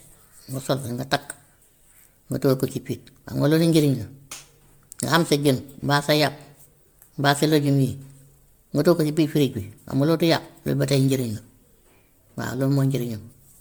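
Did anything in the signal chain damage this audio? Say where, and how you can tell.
Yes, at the codec stage: generation loss throughout, likely from about seven MP3 passes at 128 kbit/s. Swirly, hollow smearing exceeds one encode with content up to 19.9 kHz.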